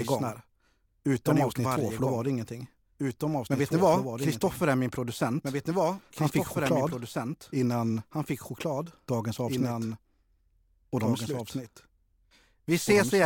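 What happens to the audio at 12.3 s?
At 12.3 s the speech is accompanied by a doubled audio track, as it is for the whole clip. A second full-band copy runs about two seconds behind the original, some 5 dB quieter, so the listener hears earlier speech overlaid on the current speech. The copy has no decay or room colour, which rules out a natural echo. It is likely caused by the signal being captured twice, once through a slower path.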